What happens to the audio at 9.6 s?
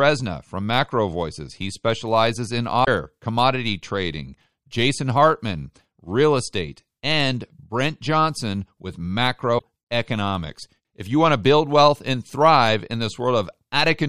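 Damaged data in the compressed stream hits from 9.55 to 9.64 s: the decoder misreads corrupted frames, loses sync and hunts for the next header, producing a brief chirp, squawk, click or short hole.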